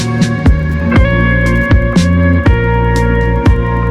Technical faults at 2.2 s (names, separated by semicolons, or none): Wi-Fi interference